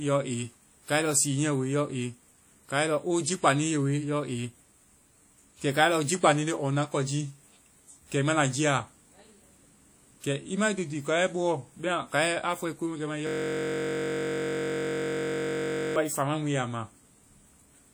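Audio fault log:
Throughout: WMA compression. The speech carries a ringing, washy quality with a hiss that swells and fades along with the signal, and quantisation noise is smeared across tens of milliseconds around each sound. This is likely a low-bitrate transform codec around 48 kbps, plainly audible.
13.27 to 15.96 s: system hang loop. For about 2.7 seconds a single 21.33 ms piece of audio repeats exactly, over and over, and merges into a steady buzz at about 46.9 Hz. That fits a 1024-sample ring buffer cycling while the system froze.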